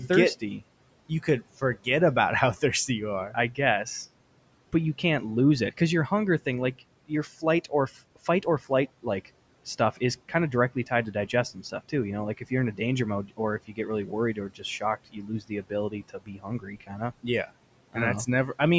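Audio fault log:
0.08–1.87 s, 2.55–3.86 s and 6.79–18.6 s, speech cut by the noise suppressor: the suppressor mistook parts of the speech for noise and turned them down with the background, by up to about 16, 11 and 19 dB. Those parts sound swallowed, around "about how" and after "because your hunger thing".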